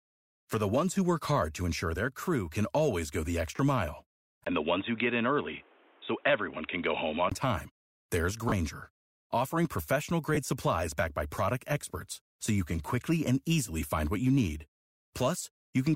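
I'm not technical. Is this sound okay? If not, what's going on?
No, there are a couple of problems. You'll hear lost LE Audio frames at 3.56 s (right after "can always go the"), 8.49 s and 10.35 s (between "offering professional" and "supplies backed by product"). Each is a tiny gap of about 20 to 30 ms where the wireless link dropped sound and the decoder papered over it with a brief noisy smear.

From 4.44 s to 7.32 s, just before "time there's", the voice turns dull and boxy with a faint hiss underneath, after a short blip of silence. That's likely the input switched to a poorer device, like a headset's call microphone.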